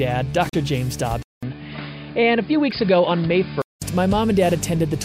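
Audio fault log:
0.49–0.54 s and 2.71 s, damaged data in a compressed stream: brief blips where corrupted frames are misdecoded and the decoder resyncs at the next header.
1.23–3.82 s, input switched to a poorer device: after a 200 ms gap the sound turns dull with nothing above 5 kHz and a new noise floor roughly 35 dB down, at much the same level, likely from a narrower-band input.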